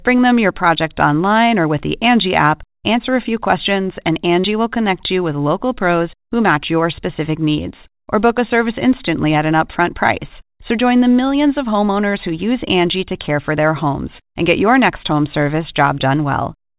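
At 4.40 to 4.46 s, between "few questions and" and "will connect you with", short concealed packet loss: about 40 ms never arrived and was filled by extending the preceding sound, leaving a brief smear rather than silence.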